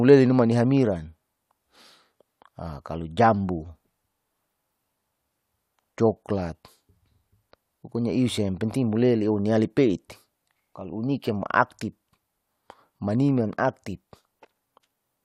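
Nothing in the speech recording registers as a technical fault at any point.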